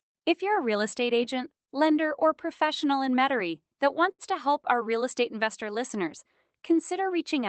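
At 4.11 to 4.22 s, just before "to help our real", there is a short stall from a late packet. The jitter buffer ran dry, so the receiver held the preceding sound for about 72 ms and resumed without losing any audio. It is heard as a slightly stretched syllable with a faint buzz or dip over the Opus call path's 8 kHz band limit.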